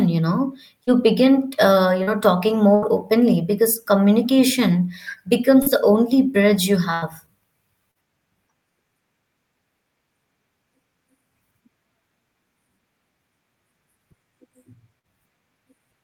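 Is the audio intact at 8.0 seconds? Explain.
No. A short concealed packet loss runs from 7.91 to 7.98 s, ending just before 8.0 s. About 40 ms of speech arrived too late for the decoder, so the receiver extended the preceding sound to bridge the gap and then crossfaded back, leaving a brief smear.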